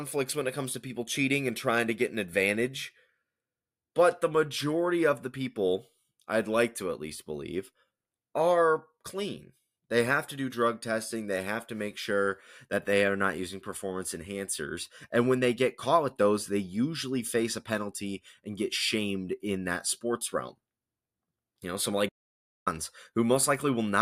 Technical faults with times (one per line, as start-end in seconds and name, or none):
22.08-22.68 playback stall